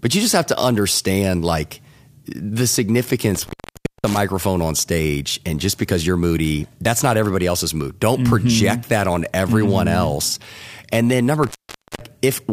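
At 3.35 to 4.17 s and again at 11.44 to 12.06 s, the speech drops out for about 0.56 s and 0.50 s, crackling at each edge with faint hiss in the gap. This is an intermittent contact: a loose plug or cable briefly opening the signal path.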